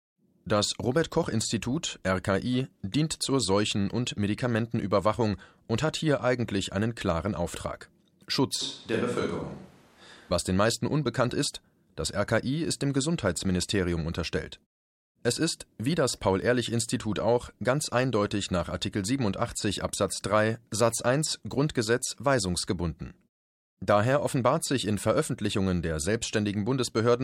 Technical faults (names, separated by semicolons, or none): switch to a distant microphone